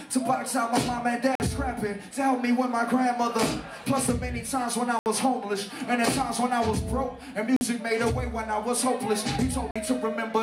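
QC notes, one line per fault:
1.35–1.40 s, 4.99–5.06 s, 7.56–7.61 s, 9.71–9.76 s: Bluetooth dropout, four holes of about 46 ms (about 70 ms at 5 s). The gap lengths fit two or three lost packets, likely from late delivery to the headphones. The sound resumes further on, as if it had kept playing. They show as blank vertical bands on a spectrogram and flat gaps in the waveform.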